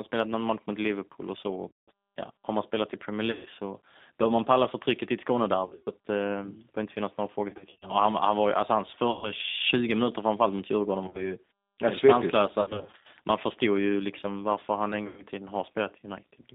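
Throughout the speech, the G.729 codec is plainly audible. At 8 kbit/s it rebuilds each 10 ms frame from a vocal tract filter, a pitch predictor and a sparse set of pulses, so the voice sounds rough and slightly synthetic. The line band runs from about 200 Hz to 3.7 kHz, so the sound is thin, with no low warmth and no sibilant air.

On top of that, VoIP packet loss concealed by the speech codec breaks up the sound at eight points: 1.68–1.89 s, 3.31–3.48 s, 5.65–5.90 s, 7.50–7.90 s, 9.11–9.32 s, 11.06–11.32 s, 12.61–13.06 s and 15.07–15.24 s. In each gap the decoder stretches its last pitch and filter state, so the sound turns into a buzzy tone or a coloured noise that fades. The spans at 5.65, 7.50, 11.06 and 12.61 s are scattered losses rather than single runs. Because each frame builds on the last, the voice stays weak or distorted for a short while after each gap ends.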